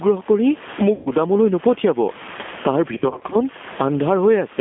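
Throughout the 4.6-second speech clip, the level swings by about 15 dB. That is gain pumping, likely from input gain set far too high with a fast limiter pulling it back on each peak, so loud and soft passages sit squashed together.

The whole clip also carries G.729 codec damage that is plainly audible. The line band runs only from 200 Hz to 3.5 kHz, and the rough, slightly synthetic texture fits an 8 kbit/s coder rebuilding speech from a filter model, a pitch predictor and sparse pulses.

From 0.95 to 1.11 s, about 110 ms of audio is missing and filled by VoIP packet loss concealment. The decoder repeats its last pitch and filter state at falling gain, so the sound smears into a fading stretch and stays weak briefly after.

From 2.94 to 3.43 s, losses totalling about 200 ms are scattered across 380 ms, with the longest run 40 ms. Each gap is patched the same way, leaving a weak or distorted stretch that recovers only gradually.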